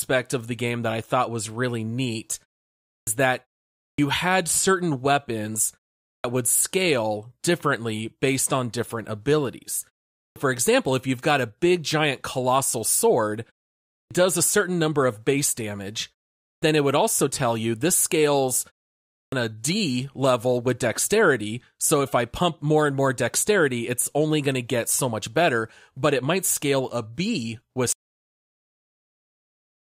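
It's a speech clip with two problems. First, a clipped start after a pause keeps biting off word onsets: at 2.91, 3.84, 6.09, 10.22, 13.97, 16.47 and 19.17 s, each after a gap of roughly 0.4 to 0.5 s, about 140 to 160 ms vanishes, so the speech jumps in abruptly. The output device is going to sleep in the silences and needs that long to wake back up. Second, there's an audio dropout to silence from 27.92 s right to the end: the sound just cuts off into dead digital silence with no room tone, which points to the input likely being lost while the recorder kept writing silence.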